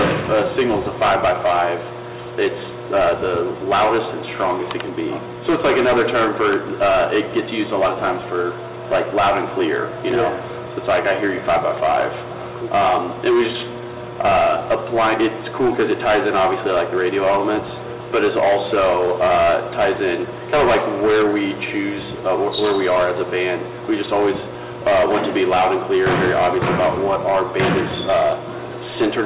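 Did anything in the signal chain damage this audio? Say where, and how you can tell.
Yes. Hard clipping runs through the whole clip, from a gain or converter stage driven about 17 dB past full scale, so roughly a tenth of samples are cut flat. Every loud passage carries harsh fuzz, with added harmonics crowding the call codec's band, which stops at 4 kHz.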